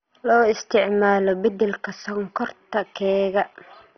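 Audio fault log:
throughout, MP2 compression (likely): the speech is dull, with nothing above about 6.1 kHz, and carries a gurgling, granular roughness that comes and goes as upper bands drop in and out. This points to MPEG Layer II coding at a low rate, around 32 kbps, where too few bits force whole sub-bands off and leave the rest coarsely quantised. Unlike a plain low-pass filter, the loss flickers and the remaining detail is grainy rather than clean.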